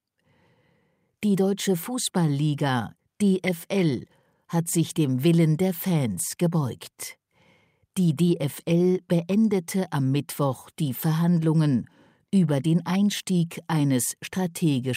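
No technical faults are audible.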